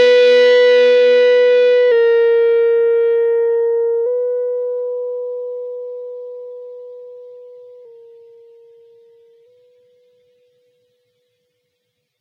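Drift correction steps occur from 1.92 to 4.06 s and again from 7.85 to 9.46 s. Each time the sound slows by about 5.7% and drops roughly a semitone, then snaps back. This is likely a clock-matching resampler abruptly changing rate to manage its buffer.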